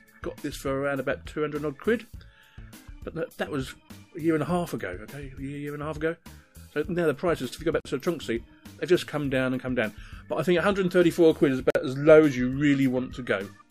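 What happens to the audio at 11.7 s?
At 11.70 s the sound drops out into a short silence, roughly 48 ms, and picks up again at 11.75 s right where it left off. That's a gap at a join of encoded pieces: two separately encoded chunks were stuck together without trimming, so the encoder's start-up delay and the padding on the last frame both stayed in. The edges of the hole are smeared by the codec.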